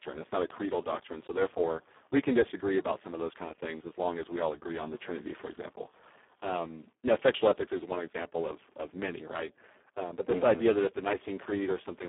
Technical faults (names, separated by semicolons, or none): Speex codec